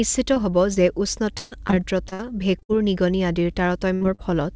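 Speech clip that's been through a call, band-limited with nothing above 8 kHz, which fits G.722 at 64 kbps. There are four bits of short concealed packet loss, at 0.34–0.38, 0.74–0.78, 4.03–4.06 and 4.15–4.20 s. Each one is a hole of roughly 20 to 40 ms where audio didn't arrive in time, and the decoder papered over it by carrying the last sound forward before blending back in. You hear a quick smear or wobble, and a short consonant can just disappear.

From 1.38 to 2.71 s it's repeated packet loss, and this is where it gets robotic. Gaps keep landing back to back, the longest about 135 ms, so roughly a quarter of that stretch is concealment rather than real audio. Each patch extends the previous sound before the next hole hits, which gives that choppy, robotic quality with chunks missing.

At 3.95–4.03 s there's a burst of packet loss, about 60 ms gone in one go. The receiver sustains the last sound and fades it down across the gap, so you get a held buzz or a dying hiss. 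Then the audio picks up further along with that piece simply missing, and the short concealment at 4.03 s lands right on its tail, so the damage there runs together.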